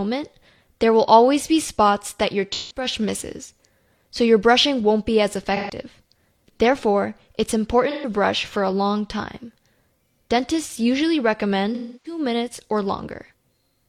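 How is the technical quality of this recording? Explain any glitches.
The recording has four audible dropouts in the speech, each a brief smeared, hollow or noisy patch where the sound loses its detail. They fall at 2.52 to 2.85 s, 5.56 to 5.75 s, 7.90 to 8.09 s and 11.74 to 12.19 s. These are AAC frame loss with concealment: stretches of encoded audio went missing, about 0.17 s, 0.13 s, 0.13 s and 0.3 s long, which fits the loss of several consecutive frames. The decoder covered each gap by reusing the last good spectrum, which produces the blurred, synthetic texture.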